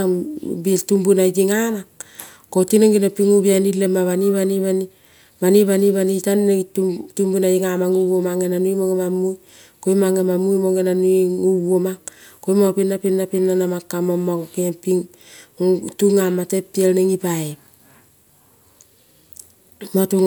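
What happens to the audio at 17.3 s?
At 17.3 s the speech continues cleanly, with no dropout, click, distortion or other fault.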